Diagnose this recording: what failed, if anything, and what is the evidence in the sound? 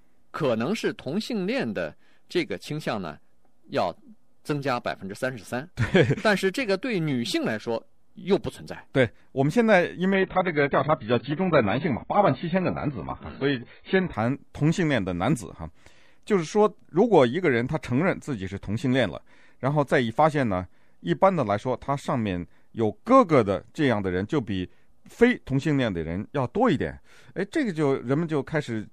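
Network: from 10.14 to 14.14 s, speech suddenly loses everything above 4.5 kHz without a gap. That's an adaptive stream at a lower bitrate after the connection slowed.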